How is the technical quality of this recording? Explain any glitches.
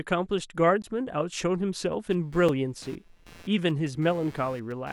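The recording has two kinds of fault: brief dropouts to digital silence and a buzzing interference that runs through the second half.

At 0.82 s and again at 2.49 s, the speech is interrupted, first by a short hole and then by a tick. These are blocks of digital silence. The samples drop abruptly to silence and then resume, with no fade at either edge. The first gap lasts 16 ms and the second about 5 ms, which fits a 256-sample block. That length points to an output buffer the software did not fill in time.

From 2.11 s to the end, a scratchy buzz pulsing around 150 times a second sits under the speech, roughly 25 dB below it. This is computer activity noise. Changing load on the processor, graphics card or other hardware disturbs the ground shared with the audio circuitry, and that disturbance leaks into the signal. Because it follows the machine's workload rather than the speech, it continues regardless of what is being said.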